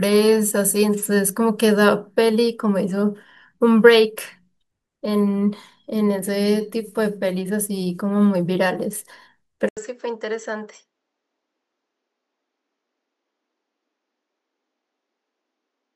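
Input switched to a poorer device at 9.69 s, lasting to the end of the speech. A silence of 80 ms marks the switch. After it, the sound is duller, with nothing above 7.8 kHz, and roughly 10 dB quieter. A new noise floor appears, around 50 dB below the signal. This is likely the system changing its capture path mid-recording to another microphone or headset, whose narrower band and different level replace the original input.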